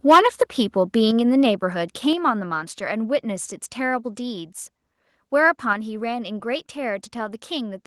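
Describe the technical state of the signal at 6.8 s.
At 6.8 s the speech signal is intact, with no fault audible at that moment.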